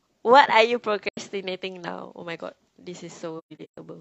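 AAC frame loss with muting at 1.08 to 1.18 s: about 85 ms of speech vanishes, consistent with two lost frames whose spectrum the decoder zeroed, so overlapping windows fade the sound out and back in. At 3.38 to 3.77 s, the same fault leaves repeated soft-edged holes totalling about 300 ms across a 430 ms stretch, the longest gap around 150 ms.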